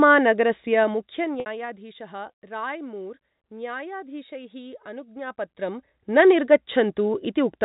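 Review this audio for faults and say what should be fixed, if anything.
Zipper noise runs from 0.68 to 1.79 s as the level drops by roughly 15 dB in 2 dB steps, about ten a second, each step ticking audibly. It comes back from 5.12 to 6.23 s as the level climbs roughly 15 dB the same stepped way. Smoothing the gain per sample, or ramping each change across the buffer, would get rid of it.

Packet loss with pitch repetition shows up from 1.40 to 1.46 s. About 60 ms goes missing, which fits three 20 ms packets, and the receiver repeats the last pitch period, fading it out into a brief silence before the speech returns with a short cross-fade. This sits right inside the first zipper stretch. A jitter buffer with some headroom, or forward error correction on the link, would cut down these dropouts.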